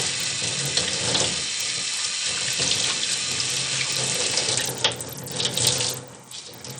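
An everyday sound recording carries plainly audible damage from start to finish. The treble thins and flickers, and a gritty, aliased haze sits on the sound, likely Bluetooth SBC compression at a starved setting, which fits a bitrate near 80 kbps. With so few bits, the upper sub-bands drop out and the remaining bands are coarsely quantised.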